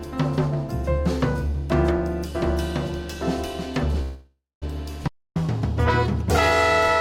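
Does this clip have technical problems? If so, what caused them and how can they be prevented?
Yes. From 4.01 to 4.64 s there is a call audio freeze: the last sound is held as a buzz or hiss that fades, with about 0.21 s of silence, then the audio resumes where it stopped. Packets were likely delayed and the jitter buffer ran dry, adding about 0.6 s of delay. A larger adaptive jitter buffer and a steadier network path prevent this.

At 5.08 s a playback stall cuts the sound dead for about 0.28 s before it picks up again at 5.36 s. The likely cause is that the player ran out of data or its audio thread was blocked. Deeper output buffering and keeping the audio thread free of blocking work prevent it.

From 5.36 s to the end, catch-up at higher speed makes the audio run at 1.1 times normal speed and sound about one and a half semitones sharp, as the player resamples to drain its backlog after the stall. 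Catching up with pitch-preserving time-stretching, or dropping the lag gradually, avoids the audible pitch rise.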